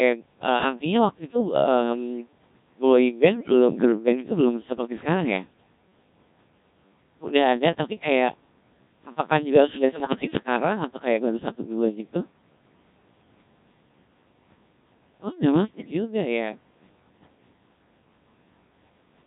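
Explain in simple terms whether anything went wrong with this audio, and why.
Throughout, the speech sounds robotic and buzzy because it went through the Codec 2 vocoder. Rather than keeping the actual sound wave, it sends only a rough description of pitch, loudness and tone, and the receiver rebuilds a synthetic voice from that.

Twice there are short bursts of bit errors on digital voice radio: from 3.34 to 3.52 s, and from 10.00 to 10.47 s, right after "apakah juga sudah". Scrambled data makes the rebuilt voice jump in pitch and loudness and break into bleeps and warbles. Unlike the steady codec sound, these are brief, sudden outbursts.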